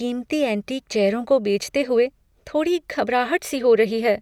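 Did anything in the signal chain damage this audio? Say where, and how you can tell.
No, nothing in the signal chain damaged this audio.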